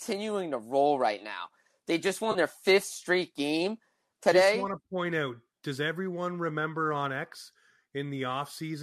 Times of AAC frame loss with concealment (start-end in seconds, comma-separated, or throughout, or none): 2.31-2.37